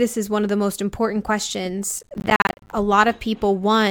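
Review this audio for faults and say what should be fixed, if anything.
Processor overload crackle from 1.98 to 2.72 s: dozens of roughly 10 ms buffers miss their deadline and drop to silence, showing as repeated waveform gaps and vertical broadband streaks. Prevent it by raising buffer size or reducing processing load during capture.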